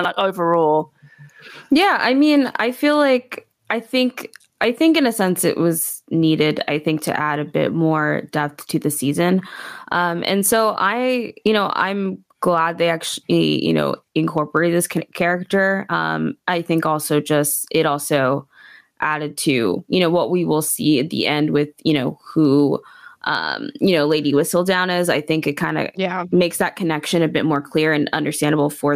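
Gain pumping runs throughout the speech: the gain ducks by around 15 dB under louder sounds, likely from excessive input gain driving a fast limiter.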